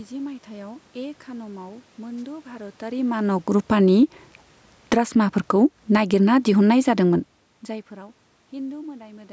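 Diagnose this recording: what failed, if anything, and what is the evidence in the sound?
Wireless microphone noise hit, 2.17 to 2.23 s. A brief swish of static cuts across the speech for about 60 ms. This is in the radio link before the analogue input. The analogue FM microphone's signal faded as reflected paths cancelled at the receiver. Receiver noise rose and briefly swamped the audio, then cleared once the carrier recovered. The talker's own shift in level, roughly at 2.5 s, comes just after and is separate.

Automatic gain falling, 3.56 to 3.96 s and 4.77 to 7.37 s. The speech and its room background sink together, by about 4 dB in the first episode and about 6 dB in the second, longer one. This belongs to the call processing stage. The automatic gain control judged the input too loud and pulled its gain down gradually. Because voice and background drop in step, this is not the talker backing off.

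Automatic gain rising, 3.91 to 4.33 s and 5.03 to 6.51 s. Speech and background swell together by about 4 dB each time. These rises overlap the falls, so the level seesaws through the middle of the clip. Here the same call-processing gain control judged the input too quiet and raised its gain over a few hundred milliseconds to well over a second. The controller is chasing the signal instead of settling, and the talker's movement near 7.0 s adds to the variation.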